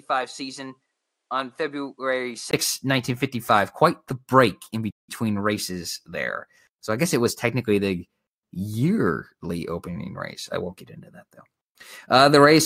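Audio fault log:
0.00–2.53 s input switched to a poorer device: a duller, quieter opening with a faint noise floor and a 20 ms gap; likely a lower-grade microphone, showing a hard spectrogram ceiling and a smaller waveform.
4.90–5.09 s playback stall: the sound drops out for 172 ms after "the break in" and resumes with "races there", likely the player starving for data; the waveform shows a flat silent gap.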